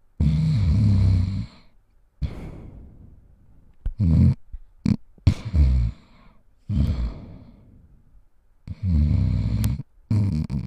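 A single sharp tick sounds at 6.87 s, then a much louder one at 9.64 s, peaking near about -25 dBFS and about -1 dBFS. Each is a bit error spike: one flipped bit threw a single sample off by a power of two, creating a broadband click unrelated to the surrounding sound.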